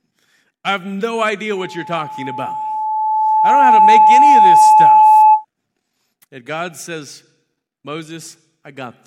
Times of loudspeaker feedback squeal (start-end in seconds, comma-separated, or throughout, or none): 1.56-5.45